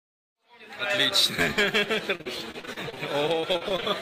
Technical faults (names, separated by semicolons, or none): repeated packet loss (robotic sound)